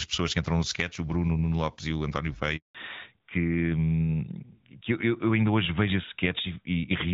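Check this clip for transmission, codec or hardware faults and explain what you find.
Two transmission faults appear, both tied to a network handover partway through the call.

A handover gap runs from 2.57 to 2.75 s. The call switched networks and no speech frames arrived for about 180 ms. The speech cuts out abruptly, and whatever was said in that window is simply missing until the new link delivers audio again.

A fallback to narrowband follows immediately, from 2.75 s to the end of the clip. After the handover the call moved from wideband AMR-WB to narrowband AMR-NB, so nothing above 4 kHz survives. The speech loses its top-end clarity and sounds duller and rougher than before the gap.

Before 2.57 s the AMR wideband (HD Voice) codec is audible with only light coding damage, which fits a rate around 12.65 kbit/s.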